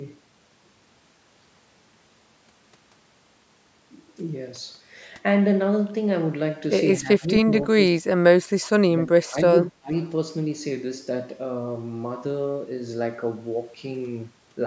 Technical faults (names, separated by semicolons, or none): speech suppressed in double talk